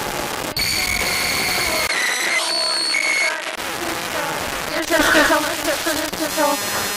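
The audio goes dull and narrower between 1.87 and 3.57 s, with nothing above 11.8 kHz, a 20 ms gap at the changeover and a new noise floor roughly 35 dB below the signal at about the same level, likely an input switched to a poorer device.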